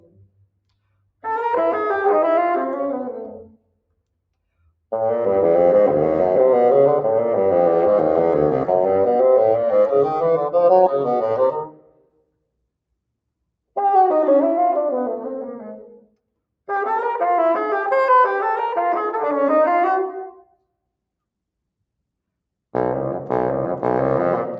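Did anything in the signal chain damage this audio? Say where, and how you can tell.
Yes. The damage is in the call processing stage: a noise suppressor built for speech was applied to this sound and stays engaged for the whole clip. Its gain rises and falls by around 5 dB as it decides what counts as noise, so sustained content and decays sink while onsets pass, giving a pumping, thinned texture. The band-limiting to 8 kHz from the same call microphone chain is expected and is not the fault.

The sound cut by the noise suppressor is clearest at four points: 0.0–1.23 s, 3.45–4.02 s, 11.51–12.31 s and 20.35–20.64 s. In each, the level drops by up to about 19 dB, well beyond the background swing. The affected stretches total roughly a third to three quarters of a second each. The suppressor classified these held or fading portions as noise and attenuated them, cutting tails short while transients survived.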